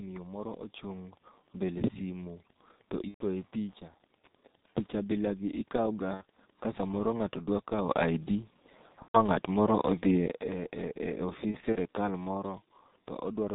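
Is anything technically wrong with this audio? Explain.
Yes. The clip is speech with three distinct faults.

G.723.1 codec, throughout: The audio has been through a low-rate telephony codec. The bandwidth stops at 4 kHz, and the heavy coding damage fits G.723.1 at about 6.3 kbit/s. The codec models the voice in 30 ms frames and updates that model slowly. As a result, the speech sounds muffled and hoarse, and consonants are smeared rather than crisp.

Wi-Fi interference, from 0.59 s to 6.77 s: A nearby Wi-Fi radio is being picked up and rectified by the audio circuitry. Its beacon repeats every 102.4 ms, which produces a steady tick roughly ten times per second. The ticking sits faint under the speech, roughly 35 dB down. It stops at 6.77 s.

VoIP packet loss concealed by the speech codec, at 3.08–3.25 s, 6.14–6.23 s, 9.02–9.18 s and 11.51–11.76 s: Packets went missing, and the decoder filled each gap by extrapolating from the last pitch and filter while lowering the gain. 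The first and third gaps each cover about 120 ms, which fits four 30 ms frames. The second covers 60 ms. The last is a scatter of brief losses over 240 ms, each no longer than 30 ms. The sound stretches into a buzzy tone or coloured noise that fades. It stays weak or distorted briefly after the packets return.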